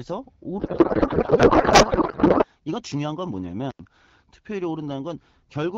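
Codec payload misread, from 0.59 to 2.45 s, turns this speech into garbled noise and warble that barely tracks the talker. The decoder is reading each AMR frame with its fields in the wrong positions, consistent with octet-aligned packing being read as bandwidth-efficient, and this persists until the formats agree again. An intermittent contact at 3.71 to 3.79 s opens for about 77 ms, cutting the sound out with crackle at both edges and leaving faint hiss while the connection is broken. Throughout, the clear AMR-WB coding sound, with its light codec damage, fits a rate of about 12.65 kbit/s.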